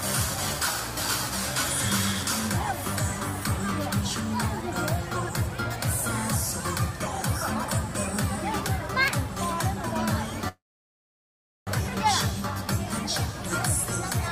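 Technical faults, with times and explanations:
10.48–11.69 s, call audio freeze: the sound stretches into a brief fading buzz, then about 1.07 s of silence, and resumes exactly where it stopped with nothing lost. Likely held-up packets emptied the jitter buffer, so everything after runs 1.19 s late.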